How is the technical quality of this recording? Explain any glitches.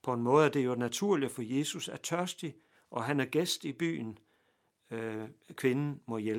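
No glitches turn up anywhere in this recording, so there's nothing here that needs explaining.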